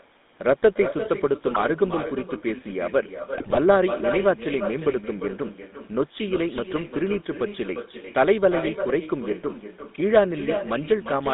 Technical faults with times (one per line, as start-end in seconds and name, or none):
0.00-11.33 echo with no canceller
0.00-11.33 GSM full-rate codec
1.52-1.71 GSM bit errors
3.38-3.59 GSM bit errors